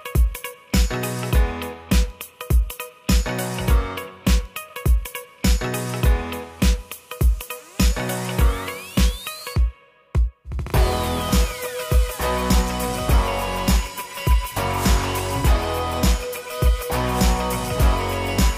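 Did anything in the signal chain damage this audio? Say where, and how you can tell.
No, nothing in the signal chain damaged this audio.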